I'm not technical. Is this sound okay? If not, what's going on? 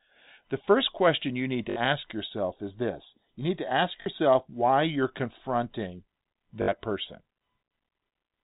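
No, there are three brief robotic stutters: packet loss with last packet repeated. Bits of the sound got lost in transit, and the player filled each gap by replaying the last snippet. This happens at 1.7 s after "first question you need", at 4.02 s after "you need to ask", and at 6.62 s after "why you're confronting".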